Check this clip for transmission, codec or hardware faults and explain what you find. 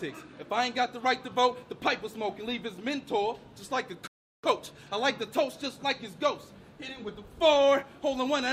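A rebuffering stall interrupts the sound at 4.07 s: it drops into silence until 4.44 s, then carries on exactly from where it broke off. The player had run out of downloaded audio and waited for more to arrive, so nothing is missing, but about 0.36 s of time is added.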